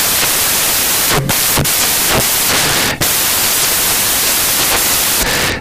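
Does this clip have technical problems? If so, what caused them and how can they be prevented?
Yes. Samples built from the wrong bytes affect the whole speech clip: the reader pairs bytes wrongly, so fast-changing low bits dominate. It sounds like broadband noise. A spectrogram shows energy smeared across all frequencies, and the waveform looks dense and noise-like. To prevent it, declare and check byte order, offset and sample width at read time.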